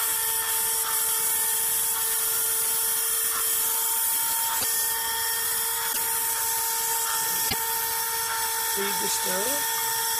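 Broken MP3 bit reservoir glitches occur at 4.59 to 4.64 s, 5.92 to 5.97 s and 7.49 to 7.54 s. Each lasts about two 26 ms frames, and the sound skips forward with a short garbled disturbance before settling. The likely cause is missing frames. The frame that follows a gap reaches back into the reservoir for bits it had stored earlier and decodes bytes from a different frame instead, so the first frames after the cut come out corrupted.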